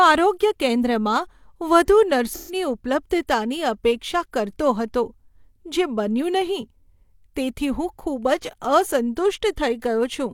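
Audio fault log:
2.33–2.55 s, AAC frame loss with concealment: a short run of AAC frames went missing, and the decoder covered about 128 ms of absent audio, which fits three lost frames, by reusing the last good spectrum with scrambled signs and carried-over energy. Since that stretch holds no real signal, the speech turns smeared and noisy with a hollow, phasey colour for about a fifth of a second before clean audio returns at "ઉપલબ્ધતાની અપેક્ષા કરતો હતો".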